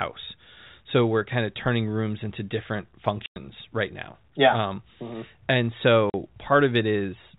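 Packet loss filled with silence cuts 100 ms at 3.26 s, after "turning rooms into different", and 40 ms at 6.10 s. Both show as hard-edged flat gaps in the waveform.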